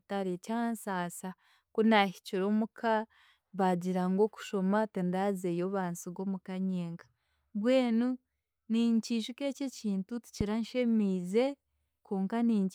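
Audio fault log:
10.41 to 10.43 s, loud pop. A single sharp pop cuts across the speech and stands clear of it, peaking roughly 10 dB above the level of the talking. It lasts only about 20 ms, then is gone. The speech runs on underneath without a break. The likely cause is a brief electrical pulse, such as a switch, static discharge or driver glitch, entering the signal path. The circuitry after it shapes that pulse into a short, hard click.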